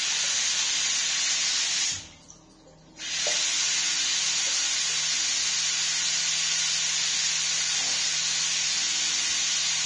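Throughout, the audio is hissy and grainy, with nothing above 9.7 kHz and blurred attacks, likely heavy Vorbis compression at a low bitrate of around 25 kbps.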